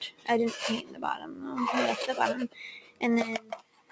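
A speech-tuned noise suppressor has been left running on non-speech audio, and it keeps mistaking sustained parts of the sound for background noise. Its gain rides up and down by roughly 15 dB, so held material and decays pump and thin while sharp onsets pass largely intact. On a waveform this shows as an envelope that swells and collapses independently of the source, and on a spectrogram as sustained energy that abruptly fades and returns. Four spots suffer most from sound cut by the noise suppressor. From 0.11 to 0.28 s the level dips by about 12 dB. From 0.82 to 1.36 s it sinks by up to about 10 dB. From 2.8 to 3.02 s it drops by about 13 dB. From 3.4 s to the end it again falls by about 13 dB. Each appears as a hollowed-out stretch of waveform and a darkened band across the spectrogram. The call microphone processing leaves nothing above 8 kHz, visible as a flat ceiling on the spectrogram.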